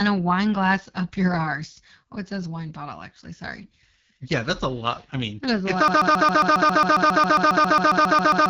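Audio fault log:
Throughout: AMR wideband (HD Voice) codec. Speech sounds rough and raspy, which fits a low mode near 8.85 kbit/s where the pulse-driven vocal tract model runs short of bits. A spectrogram shows energy ending near 7 kHz, with a smooth noise-filled band above about 6.4 kHz.
5.88 to end: broken-record loop. A 136 ms fragment repeats exactly, back to back, about nineteen times until the clip ends, and the speech that belonged there is lost. The cause is likely a stalled player or stream resending its last buffer. The waveform shows identical blocks in a row.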